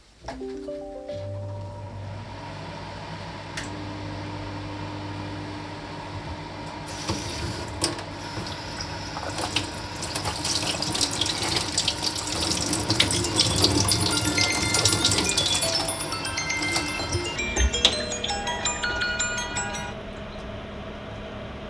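From 17.36 s to the end, the audio shows a wrong sample rate: the samples are played more slowly than they were captured, with no rate conversion. Everything runs at about 0.69 times normal speed and drops about 6.45 semitones, which fits audio recorded at 32 kHz being played back at 22 kHz. Unlike a pitch shift or a time stretch, speed and pitch move together here, so events become both slower and deeper.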